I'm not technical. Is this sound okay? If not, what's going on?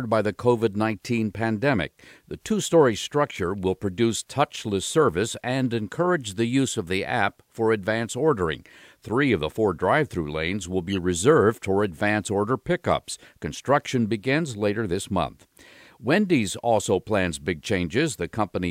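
No. There is a corrupt frame decoded at about 10.90 to 10.97 seconds, right after "drive through lanes will" and just before "reserved for advance order". For under a tenth of a second you hear a short chirp or burst of noise. The audio is stored in small compressed chunks, and one of them got damaged. The player decoded it anyway, so that single chunk came out as scrambled sound instead of speech.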